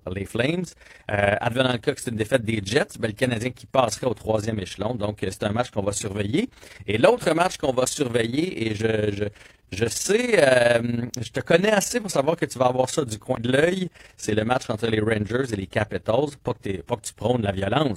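From start to finish, the speech carries overlap-add ripple. Frames were rejoined with uneven overlap gain. Level swings about 11 dB around 20 times a second, a rough flutter.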